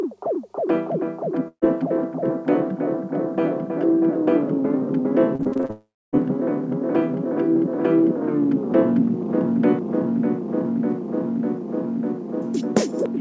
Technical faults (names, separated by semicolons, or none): burst of packet loss; repeated packet loss (robotic sound); long network dropout